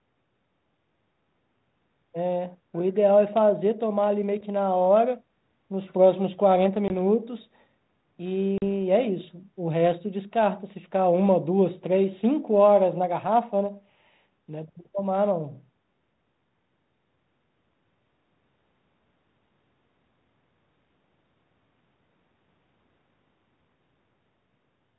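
At 6.88 s and 8.58 s the speech cuts to hard-edged silence, about 20 ms then 40 ms, and returns with slight distortion. This is packet loss on an ADPCM call: the gap leaves the decoder's predictor and step size out of step with the sender's.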